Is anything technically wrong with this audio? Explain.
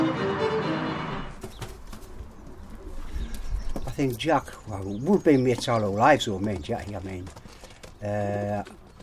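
No technical faults are audible.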